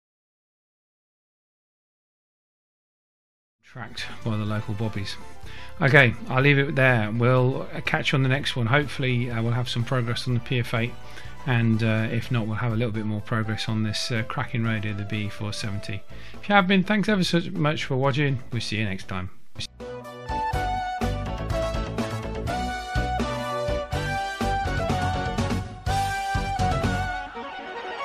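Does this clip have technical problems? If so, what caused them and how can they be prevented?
No, nothing stood out on listening, and the level rises in a smooth fade-in from roughly 3.5 s to 4.22 s with no click or hard edge.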